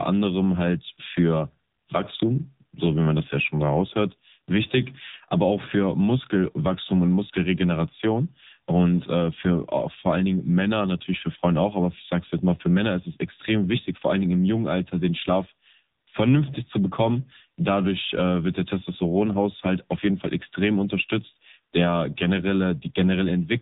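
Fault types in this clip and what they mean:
AMR narrowband mobile codec: throughout, speech sounds plainly buzzy and synthetic, fitting a 7.4 kbps mode; a spectrogram shows a hard ceiling with nothing above 3.8 kHz.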